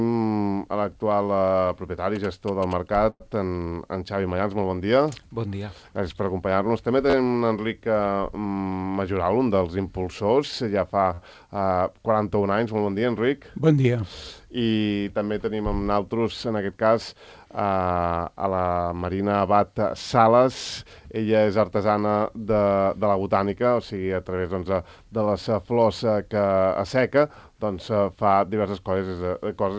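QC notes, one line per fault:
2.16–2.95 s: GSM signalling bursts. A short galloping run of buzzes at about 217 Hz, sitting roughly 15 dB below the sound. A nearby 2G phone exchanging signalling bursts gets rectified by the audio circuit. On a spectrogram: evenly spaced vertical striations with a 217 Hz harmonic comb.
3.10–3.22 s: call audio freeze. About 100 ms is filled as the last sound stretches into a fading buzz or hiss, ending in roughly 40 ms of silence before the sound resumes where it left off. Likely a packet delay that emptied the jitter buffer. Waveform: smeared decaying tail, then a flat gap.
7.10 s and 11.14 s: repeated buffer. A brief buzzy stutter where one short block plays again three times, then four times. Each block is about 11.6 ms long, which fits a 512-sample buffer, so the device replayed stale audio while waiting. Waveform: identical repeating segments with hard joins. 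Spectrogram: harmonic lines near 86 Hz.
13.65–14.04 s: jitter buffer speed-up. The sound runs hurried at about 111 % speed with unchanged pitch, as the receiver drops short pitch-period slices, around 50 ms in total, to shrink its backlog. Spectrogram: harmonics stay level while events crowd closer together in time.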